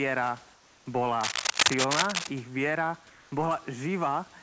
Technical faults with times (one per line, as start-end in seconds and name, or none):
0.54-0.86 comfort noise in place of the background
1.21-2.27 cable scratch noise
3.10-3.32 comfort noise in place of the background